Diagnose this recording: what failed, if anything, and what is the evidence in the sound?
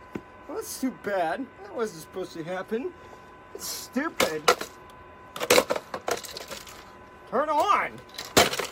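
At 6.72 s the audio lurches forward, as if a sliver of the sound had been snipped out. This is compressed frames skipped, a codec-stage fault: about one whole frame, roughly 30 ms of audio, was never played, either missing from the file or rejected by the decoder as damaged. The frame length is 26.1 ms.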